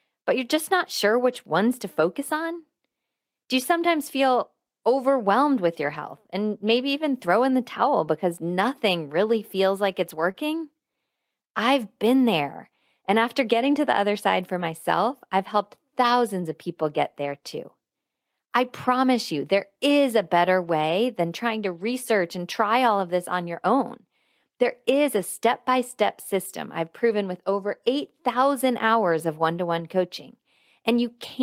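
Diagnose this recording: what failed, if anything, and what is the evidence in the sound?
At 5.81 to 5.95 s the speech turns briefly grainy and rough rather than dropping out, and a much shorter rough patch follows at 10.36 to 10.38 s. This is lost packets rebuilt from error correction, a network-stage fault. The decoder substituted low-bitrate copies carried in the following packets. The first patch covers about 80 ms, which points to four separate 20 ms packets. The second covers 20 ms, consistent with a single packet.

Just before that second patch, at 10.31 to 10.36 s, there is a brief smear or wobble where the sound seems stretched for a moment. This is short concealed packet loss, also at the network stage. About 20 ms of audio never arrived in time, so the receiver extrapolated the preceding sound for roughly 22 ms and then blended back into the real signal. The concealment leads directly into the error-corrected frame that follows.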